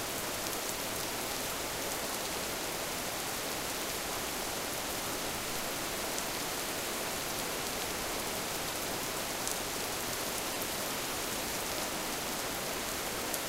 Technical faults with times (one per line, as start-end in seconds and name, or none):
10.53-10.56 lost LE Audio frames